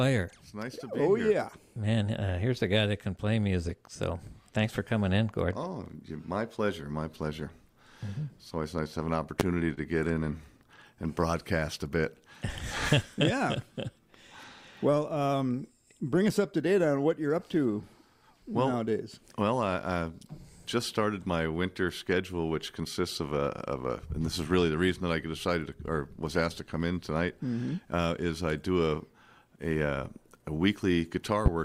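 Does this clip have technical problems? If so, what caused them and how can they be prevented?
Yes. A loud pop, a sharp thump about 25 dB above the sound, hits at 9.40 s, and a second one about 20 dB above it comes at 31.46 s, each lasting about 30 ms while the audio continues underneath. A voltage spike from a plug, switch, static discharge or driver glitch is the likely cause. Prevent it by securing connections, grounding equipment properly and not switching gear while recording.

Scattered short gaps from 9.55 to 11.25 s show up as about seven brief ticks and smears, the longest around 30 ms. Packets were lost or arrived late, and the receiver covered each hole by stretching the preceding sound. A more stable network link or stronger packet-loss protection would prevent this.

A jitter buffer slow-down from 11.60 to 12.22 s makes the audio drag to about 94% speed at unchanged pitch, with drawn-out sounds. 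The receiver repeated small slices of the signal to rebuild its reserve, adding 50 ms. Reducing network jitter keeps the buffer from running low.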